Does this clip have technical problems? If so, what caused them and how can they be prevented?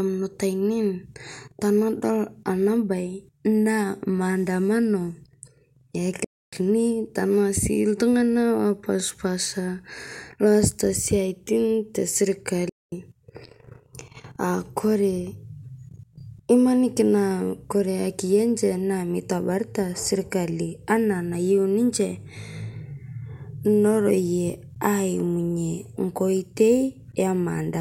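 Yes. The speech falls silent in two playback stalls, at 6.24–6.53 s (0.28 s) and 12.69–12.92 s (0.23 s), likely because the player's buffer ran empty or its thread was blocked. Unlike a click or brief dropout, each gap lasts about a quarter second. A larger playback buffer and a higher-priority audio thread would prevent it.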